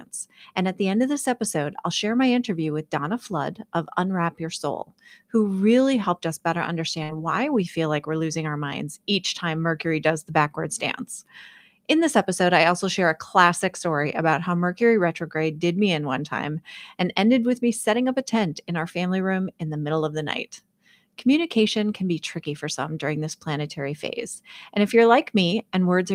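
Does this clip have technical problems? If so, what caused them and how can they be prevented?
Yes. At 7.03 to 7.11 s there is a burst of packet loss in the speech. Several consecutive packets never arrived in time, so for about 53 ms the receiver stretched the last sound it had and faded it out. Speech then resumes about 60 ms further on, with that stretch skipped. On a spectrogram this appears as a short, unchanging smear that dims, followed by an abrupt restart; the waveform shows a decaying, repetitive segment. Forward error correction or redundant packets, plus a more generous jitter buffer, would prevent it.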